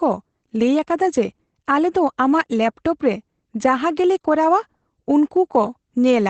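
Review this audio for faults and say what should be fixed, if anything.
Opus voice compression is audible across the whole speech clip. Nothing remains above 8.7 kHz, and the SILK linear-prediction coder's coarse excitation coding leaves the speech muffled, hoarse and slightly robotic, which fits a wideband Opus stream at about 12 kbps. To prevent it, encode at a substantially higher bitrate, or distribute from an uncompressed master, so the band limit and excitation coding are not starved.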